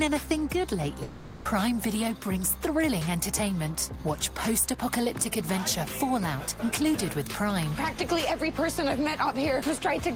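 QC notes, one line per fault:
1.03–1.47 s, long network dropout: about 420 ms of the original audio is missing, and the gap is filled entirely by a synthetic continuation of the last sound, heard as a buzzy, hiss-like tail that fades rather than dropping to silence. Playback resumes at 1.47 s from a later point, so the missing material is skipped. The likely cause is a run of lost packets covered by the receiver's loss concealment, which extrapolates the last good audio.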